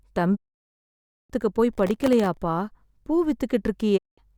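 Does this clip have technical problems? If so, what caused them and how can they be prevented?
Yes. A digital broadcast dropout mutes the speech from 0.35 to 1.32 s and again from 3.96 to 4.20 s, with a quick fade of about 20 ms into each hole. The receiver stopped getting valid frames and held silence until good ones returned. Better reception or stronger error protection would prevent it.

Processor overload crackle runs from 1.73 to 2.37 s as a gritty tearing over the speech. Dozens of very short buffers, under a millisecond each, missed their deadline and dropped out as tiny silent gaps. Larger buffers or less processing load would prevent it.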